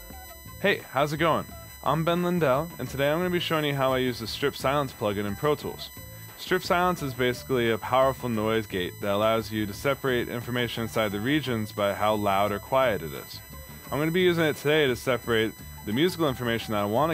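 A USB whine runs through the whole clip. It is a steady, fixed-pitch tone built on 1 kHz, with a ladder of multiples above it. The strongest part sits high, at 14 kHz, so it comes across as a thin, high whistle. It stays about 20 dB below the sound. The cause is the USB bus drawing current in 1 ms frames. That pulsing leaks into the audio through shared power or ground.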